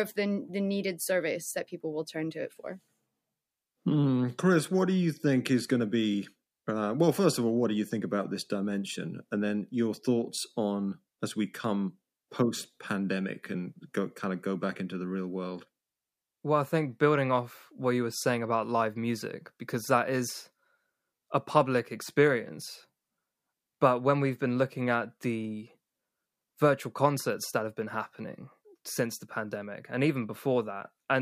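No technical faults are audible.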